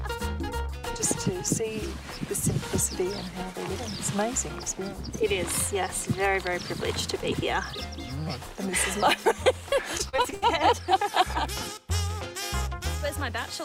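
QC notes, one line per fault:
9.97–10.44 s, repeated packet loss (robotic sound): six quick gaps, longest 78 ms, each patched by extending prior sound, so 40% turns choppy, unlike a single dropout.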